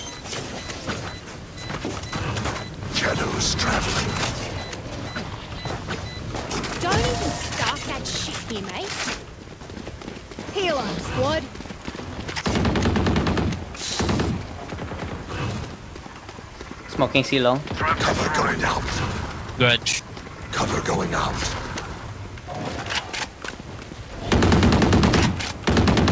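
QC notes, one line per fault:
No faults to note; the audio came over a G.722 call path, with nothing above 8 kHz.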